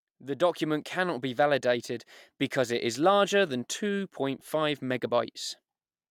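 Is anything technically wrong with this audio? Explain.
No, nothing is technically wrong with this audio.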